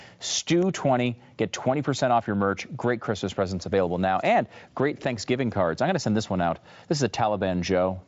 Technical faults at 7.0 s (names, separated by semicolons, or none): none